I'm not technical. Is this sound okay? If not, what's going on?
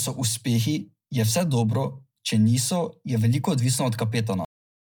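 No. The speech was likely squeezed by Bluetooth LC3 compression, which throws away fine detail, so the whole clip sounds grainy and breathy.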